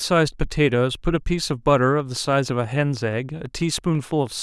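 From 1.51 s to 4.28 s, a train of clicks runs under the speech. The clicks arrive at a steady 6.15 per second, about twenty in all. Each has much the same short, sharp shape, and they peak at roughly the level of the speech. They sound like a regular ticking laid over the talking, and they carry on through the pauses. The likely cause is interference from nearby equipment or a faulty connection or power supply injecting a repeated pulse.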